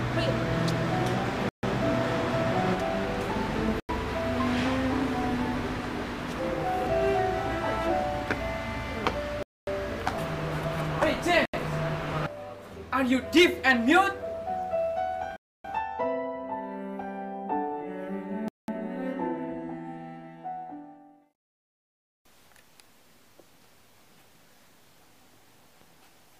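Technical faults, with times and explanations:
1.49–1.63 s, 3.80–3.89 s, 9.43–9.67 s, 11.45–11.54 s, 15.36–15.65 s and 18.48–18.68 s: Bluetooth stall. The sound drops abruptly to silence for about 80 to 280 ms, then resumes without a fade. The likely cause is radio interference delaying packets. The headphones' small playback buffer empties, so output halts until the retransmitted audio arrives and playback picks up where it stopped or slightly later.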